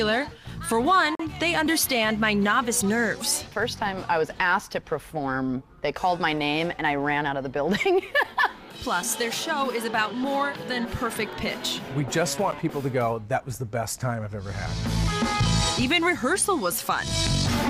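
Twice, the audio path likely failed to deliver samples in time and the gap was filled with zeros, leaving a block of digital silence with no fade at either edge. The first, from 1.15 to 1.20 s, lasts about 43 ms, which fits one missed 2048-sample buffer and is heard as a short hole. The second, at 12.51 s, lasts just under 10 ms and comes across as a brief tick.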